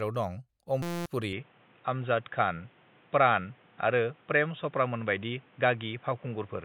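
At 0.82 s the speech locks into a system hang loop until 1.06 s: a 5.8 ms slice repeats about 40 times, so you get a flat buzz at 172 Hz, which fits a 256-sample buffer cycling while the driver froze, swallowing roughly a fifth of a second.

From 1.33 s to the end the sound turns dull and boxy, with nothing above 3.8 kHz and a new low hiss well under the speech. There's no gap and the level barely moves, so the input likely switched to a poorer device.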